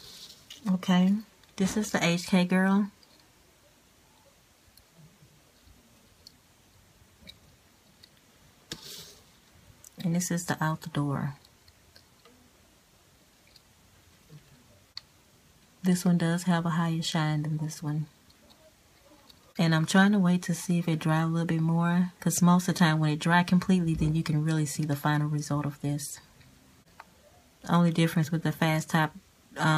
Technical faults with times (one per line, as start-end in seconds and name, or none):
none